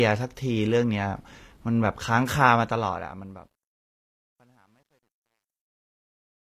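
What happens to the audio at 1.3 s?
At 1.3 s the speech has low-bitrate audio saved at a high bitrate, lasting the whole clip. A spectrogram shows a hard ceiling at 14.9 kHz, likely left by an earlier low-bitrate encode that the MP3 cannot restore.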